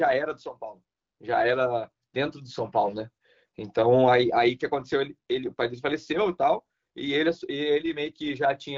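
Listening to this speech recording, nothing stood out as a technical problem, and it carries the band-limited character of wideband HD Voice coding at a rate high enough to keep it clear.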